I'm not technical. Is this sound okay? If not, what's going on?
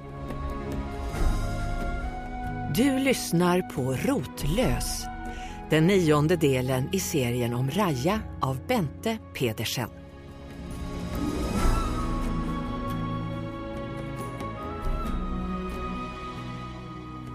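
Yes, the sound is technically fine, with nothing in the signal that points to a problem anywhere in the recording.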